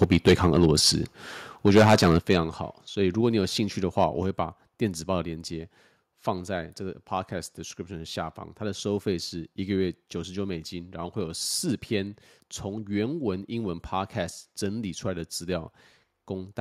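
From 0.02 to 0.88 s the speech shows microphone overload: peaks run about 9 dB past the converter's limit and a few percent of the waveform is flattened, giving a harsh, crackling edge to the loudest syllables. The likely cause is an input volume set too high, so the converter hits its limit and squares off the tops. At 0.04 s the microphone volume is stepped down by 3 dB, a sudden level drop, likely the call software reacting to that clipping.

A second overload follows from 1.66 to 2.33 s, about 10 dB over with roughly a tenth of the samples clipped, so the distortion is denser and grittier, again likely from excessive input gain. At 2.19 s the level falls abruptly by 8 dB, most likely an automatic step-down of the input volume triggered by this peak.

Further microphone volume step-downs arrive at 3.21 s and 4.23 s (3 dB each) and at 5.25 s (1 dB), roughly one per second. Each is an instant drop in both speech and background, likely the gain control still easing the input down after the overloads.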